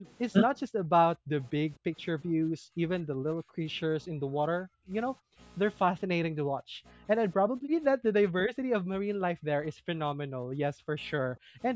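Throughout the speech, a channel delay causes comb filtering. One channel trails the other by roughly 20 ms, and summing them to mono cancels shared content at evenly spaced frequencies from around 20 Hz upward, leaving a rough, slightly doubled sound. A spectrogram shows fixed, closely spaced horizontal notches.

The background is gated by the echo canceller at 1.17–1.32, 1.78–1.89, 2.25–3.63, 4.03–5.38, 6.35–7.05, 7.37–7.82, 8.47–9.87 and 10.25–11.60 s. The microphone was pulled down by about 31 to 40 dB while the loudspeaker played, so room sound drops out and then returns. The waveform shows abrupt troughs in the noise floor, and the spectrogram shows blank gaps.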